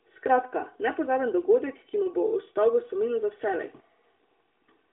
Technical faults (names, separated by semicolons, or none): channel delay (comb filtering)